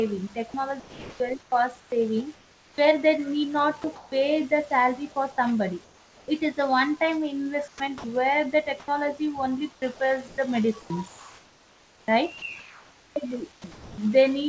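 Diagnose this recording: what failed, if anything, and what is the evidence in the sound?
Between 0.50 and 2.78 s, at 7.68 to 8.04 s and from 9.72 to 13.98 s the speech turns choppy, with soft syllables and word edges replaced by flat hiss. This is sound chopped by the voice detector, likely call-processing voice activity detection toggling transmission repeatedly.

At 3.82 s a tiny piece of speech vanishes into steady noise before the signal resumes. This is sound dropped by the voice detector: the sending side most likely judged that quiet moment to be background and stopped transmitting, leaving the receiver to fill the hole.

Around 3.82 to 4.12 s, 5.84 to 6.28 s and 8.80 to 8.88 s the room background becomes smooth and featureless. It sits about 3 dB quieter at 5.84 s and about 4 dB louder at 8.80 s. This is comfort noise in place of the background, likely from discontinuous transmission in a call path that, with nothing above 8 kHz, fits G.722.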